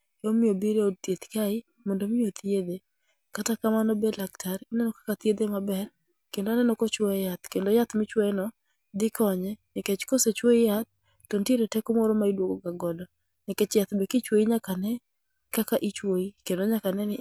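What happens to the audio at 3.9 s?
Nothing goes wrong at 3.9 s; the speech plays through that moment intact, with no dropout, click or distortion.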